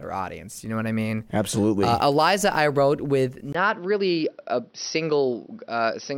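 At 3.53 s, right after "I wrote with", the speech drops out for about 20 ms and returns duller and narrower through to the end, with nothing above 5.9 kHz. The loudness stays about the same, but a faint new noise sits roughly 45 dB under the speech. This is likely an input switched to a poorer device. On a spectrogram the upper band empties abruptly at the switch, and the waveform shows a brief flat gap there.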